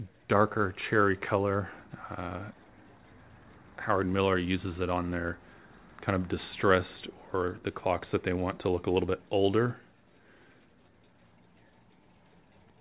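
No technical faults are audible.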